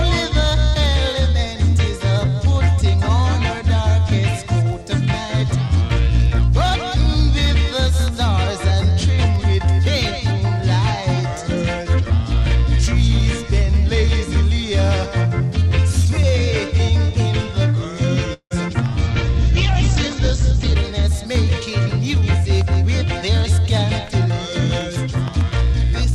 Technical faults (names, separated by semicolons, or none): call audio freeze; call bitrate drop; jitter buffer speed-up